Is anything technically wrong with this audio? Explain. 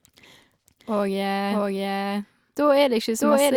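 Yes. A doubled audio track runs throughout: an equally loud, dry copy of the speech trails about 0.7 s behind, likely captured again by a slower path.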